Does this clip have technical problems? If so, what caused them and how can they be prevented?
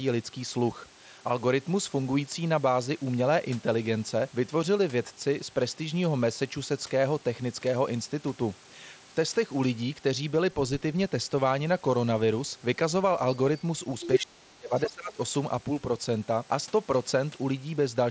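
Yes. Other side's voice leaking through appears three times: a faint scrap far below the talker from 13.58 to 13.62 s, a stronger burst from 14.0 to 14.19 s at roughly the talker's level or slightly above, and a moderate fragment at 14.85 to 14.9 s, around 15 dB down. The likely cause is residual loudspeaker echo that the echo canceller failed to subtract from the microphone signal. It leaks through in short pieces. Using a headset or a better-converged acoustic echo canceller with tighter loudspeaker-to-mic isolation would prevent it.

Speech suppressed in double talk follows from 14.2 to 15.18 s. The talker's level drops by as much as 25 dB or so, and about 0.7 s of that stretch is affected. This is likely the echo canceller's suppressor reacting to simultaneous near-end and far-end speech. Unable to separate the two, it attenuated everything, including the wanted voice, while the other side was talking. 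The band, which stops at 8 kHz, fits the wideband Bluetooth mSBC headset link. A double-talk detector that holds off suppression when near-end speech is present, or full-duplex echo cancellation, would avoid this.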